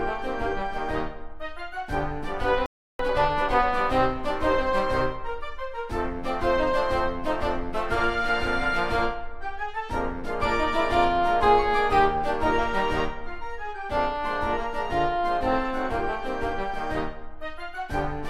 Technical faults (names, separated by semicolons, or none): playback stall; time-compressed catch-up